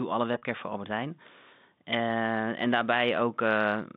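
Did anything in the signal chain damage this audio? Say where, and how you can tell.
Yes. Packet loss with pitch repetition, from 0.38 to 0.42 s, damaged the audio at the network stage. About 40 ms of the signal went missing, which fits two lost 20 ms packets, and the receiver filled the hole by repeating the last pitch period. That gap is shorter than the concealment's fade, so you hear a briefly held, slightly buzzy tone rather than a dropout. The G.711 telephone band of about 150 Hz to 3.7 kHz continues straight through it.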